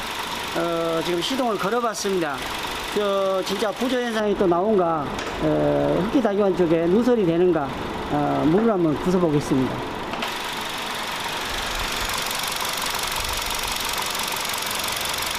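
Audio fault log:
4.20–10.22 s, de-emphasis applied wrongly: a treble cut meant to reverse pre-emphasis hits audio that never had it, or is applied twice, so the response slopes smoothly to about 11 dB down at 10 kHz relative to 1 kHz, muffling the sound. A low-pass filter would instead cut off abruptly.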